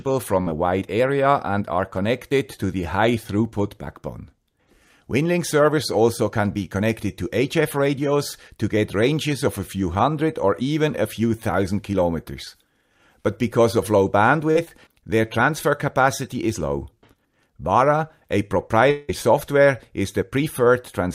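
Three network faults affect the audio. A burst of packet loss comes first, from 0.41 to 0.53 s. About 40 ms of audio went missing, the receiver filled about 50 ms by extending the last sound, and roughly 13 ms were dropped outright, so the audio resumes slightly further on. On a spectrogram this looks like a short band of frozen, smoothly fading harmonics or smeared noise, with a small jump where the real signal returns. At 14.51 to 14.57 s there is a short concealed packet loss. About 40 ms never arrived in time, and about 38 ms of synthetic continuation covers the hole before it blends back into the real audio. The result is a brief smear or wobble. On the spectrogram it shows as a slightly blurred column. The third fault, from 18.91 to 19.10 s, is likely a long network dropout. About 180 ms of audio is missing and about 174 ms has been filled with a decaying continuation of the last sound, so there is no true silence, just a held buzz or hiss that fades. 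A spectrogram shows a stretched, featureless patch thinning out over nearly two tenths of a second, then an abrupt return of normal detail. On the waveform the envelope tapers down and then resumes without warning.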